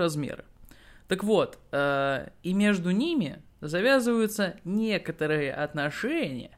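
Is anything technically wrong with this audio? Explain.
No, nothing stood out as technically wrong on listening to this speech recording.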